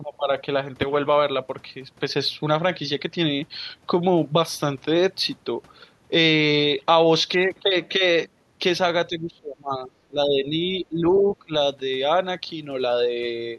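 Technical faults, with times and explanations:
9.09–11.53 s, speech suppressed in double talk: the speech ducks by up to about 25 dB for roughly two seconds in total, likely because the echo canceller turned down both sides during overlapping talk, unlike a plain network dropout.
11.18–11.33 s, other side's voice leaking through: a second voice about 20 dB below the speech breaks in, likely as loudspeaker echo the canceller missed, not a delayed copy of the talker.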